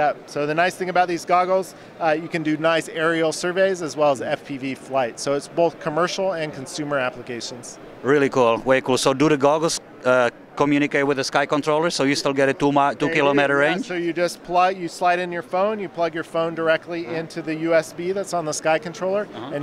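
No technical faults can be heard anywhere in the recording, and the signal stays steady and intact throughout.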